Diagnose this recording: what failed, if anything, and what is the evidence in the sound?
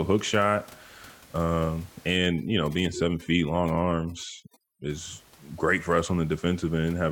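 The failure is in call processing: overdone noise removal between 2.17 and 4.90 s. In that span the background, a room noise sitting about 26 dB below the speech, drops and breaks up into twinkling specks. The suppressor is set too aggressively, so it drives individual frequency bands down or off whenever they come close to its noise estimate. The quieter components of the speech fall under that threshold and are removed along with the noise.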